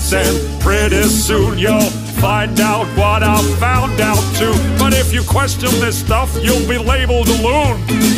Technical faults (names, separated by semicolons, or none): none